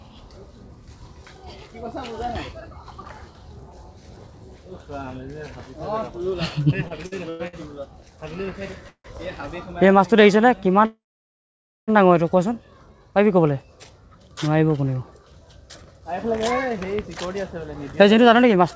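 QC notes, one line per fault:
6.88–7.78 s, repeated stalls (stutter): packets arrived late five times and the jitter buffer kept running dry, so the receiver stretched the last sound across about a quarter of this span, 238 ms in total, the longest gap 97 ms. Nothing drops out, but the sound drags and stutters.
8.88–9.06 s and 10.85–11.90 s, call audio freeze: delayed packets likely emptied the jitter buffer, so the last sound was held and faded. The first freeze lasts 163 ms with 80 ms of silence, and the second lasts 1.02 s with 0.89 s of silence. Playback then resumes where it stopped, pushing everything later.
15.11–16.93 s and 17.38–18.58 s, jitter buffer speed-up: with surplus audio queued, the receiver trimmed many short pitch-period slices to reduce delay, running at 107% and then 106%. Roughly 150 ms and 70 ms were removed. Pitch holds steady, but the sound feels hurried.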